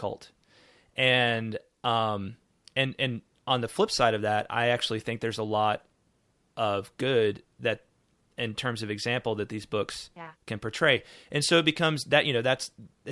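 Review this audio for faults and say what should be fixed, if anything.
Nothing here needs fixing: I listened to the whole speech recording and didn't hear a single technical problem worth flagging.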